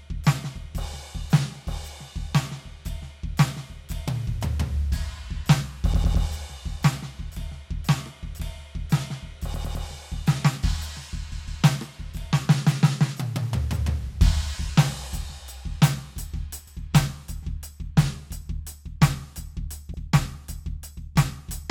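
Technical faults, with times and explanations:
5.93–6.25 s, 9.54–9.85 s, 11.31–11.63 s, 16.67–16.75 s and 19.93–20.01 s, repeated frames: the same short chunk of music, 78 to 157 ms long, replays one to three extra times, giving a stuttering loop.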